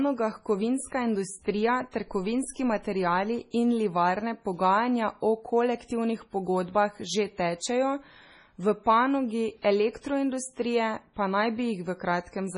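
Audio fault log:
Throughout: MP3 compression. The speech sounds watery and swirly, with nothing above 10.6 kHz and weak frequency detail flickering in and out between frames, and the damage is heavy. This points to an MP3 encode at a low bitrate, likely around 24 kbps, where the encoder strips the treble and drops quiet components. Unlike plain low-pass filtering, the loss shifts from moment to moment, giving a moving, metallic texture rather than a steady dullness.
9.62 to 9.64 s: pre-echo. A brief hiss of about 26 ms comes just ahead of the sharp onset before "elektroindustrije pa naj", and that attack sounds softened. The codec spread its quantisation noise across the whole block, so noise meant for the loud onset leaked into the quiet gap before it. What separates it from a click or dropout is that the noise arrives before the transient and is tied to it, not to a gap or discontinuity.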